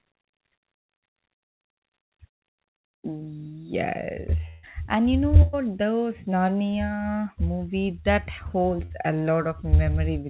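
At 4.48 s, a burst of packet loss cuts into the speech for about 150 ms. The receiver stretches the last sound to cover it and lets it fade. Then the speech jumps ahead, with roughly 140 ms gone. The same happens at 5.42 s, just after "you know", for about 110 ms. At 8.85 s, after "movie that", a shorter gap of about 55 ms follows. The narrowband call sound has nothing above 4 kHz.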